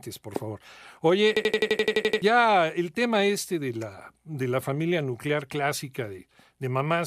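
From 1.37 s to 2.22 s the speech turns into a rapid machine-gun stutter: one fragment of about 85 ms plays back exactly, ten times in a row, at roughly 11.7 repeats per second. This is a system hang loop. The computer or its audio driver stalled while the sound hardware kept replaying the same ring buffer, whose length fits a 4096-sample buffer. When playback resumes, about a second of speech is missing.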